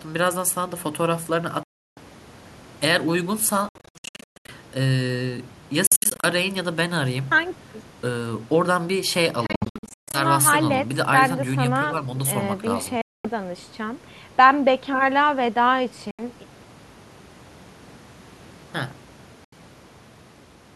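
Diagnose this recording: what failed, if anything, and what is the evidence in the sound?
The speech cuts to silence seven times: 1.63–1.98 s, 3.69–4.49 s, 5.87–6.26 s, 9.46–10.19 s, 13.01–13.27 s, 16.11–16.22 s and 19.45–19.53 s. The gaps start and stop abruptly or with a fade of a few milliseconds. At 3.69, 5.87 and 9.46 s the silence breaks into clusters of short holes, the longest 0.14 s. Each time, speech resumes further on, as if it had kept playing. This points to the wireless playback link, likely a Bluetooth dropout. Packets arrived too late and were discarded.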